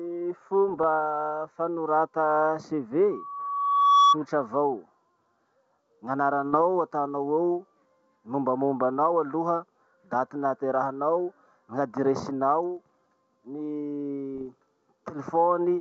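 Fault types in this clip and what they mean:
Bit errors on an ADPCM link: flipped bits upset the decoder's step size and predictor, so each hit rings on as a rough, popping burst with a brief level jump, at 0.68–0.84 s, 6.53–6.57 s and 14.35–14.46 s. The sound never drops to silence as it would in a dropout.
Loudspeaker feedback squeal: the microphone picks up its own loudspeaker until the loop gain at 1.1 kHz exceeds one. That tone swells over about a second to roughly 10 dB above the speech, 3.11–4.17 s. Its steady build-up sets it apart from a constant interfering tone.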